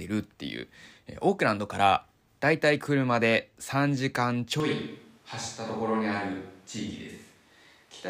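Switch to a distant microphone at 4.6 s, lasting to the end: the speech suddenly turns roomy and hollow, with thinner bass, and drops by roughly 5 dB. More background room noise comes up, sitting around 30 dB below the speech. The likely cause is that the close microphone's feed was lost or dropped, leaving a far-off pickup such as a camera microphone to carry the recording.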